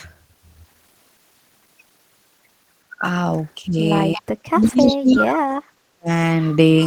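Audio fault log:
3.67 to 3.75 s, 4.16 to 5.71 s and 5.95 to 6.09 s, speech suppressed in double talk: the speech dips briefly by roughly 10 dB at 3.67 s, then over the long stretch from 4.16 s it is pushed down as far as about 40 dB, falling away in pieces for around a second in total, and near 6.0 s it nearly vanishes again. This is likely an echo canceller that could not tell the near talker from loudspeaker echo while both sides spoke, so it attenuated everything.
4.17 to 4.21 s, 4.61 to 4.96 s and 5.14 to 5.20 s, echo leak: a delayed copy of the speech trails it by 346 ms, first as a short scrap about 20 dB below the voice, then as a longer stretch and a brief burst both about 10 dB down. This likely comes from a loudspeaker on one side whose echo canceller let part of its microphone pickup through, sending the sound back a third of a second late.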